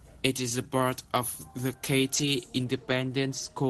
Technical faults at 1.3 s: pre-emphasis left on

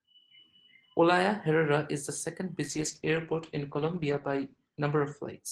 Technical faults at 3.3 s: call bitrate drop

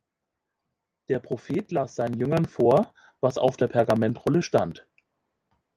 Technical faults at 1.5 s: automatic gain rising

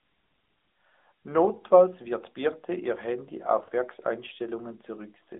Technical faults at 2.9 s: AMR narrowband mobile codec

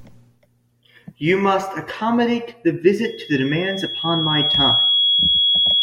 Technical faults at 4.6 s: loudspeaker feedback squeal

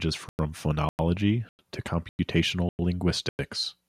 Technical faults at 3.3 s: gap between chunks

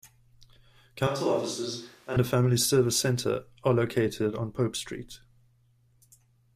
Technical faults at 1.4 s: switch to a distant microphone

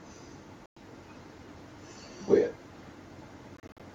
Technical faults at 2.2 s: none

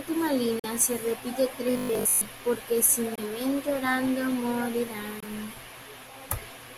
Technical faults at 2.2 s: robotic sound from repeated short buffers

